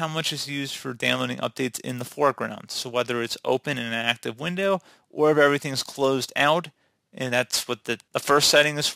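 No technical faults can be heard anywhere in this audio. Nothing in the sound points to a problem at any point along the way.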